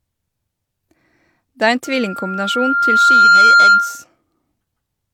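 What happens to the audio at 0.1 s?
At 0.1 s the speech carries the same coding artefacts heard throughout the whole clip, consistent with low-bitrate audio saved at a high bitrate: likely a low-rate HE-AAC encode re-saved as high-bitrate MP3. The second pass preserves, but cannot restore, what the first discarded.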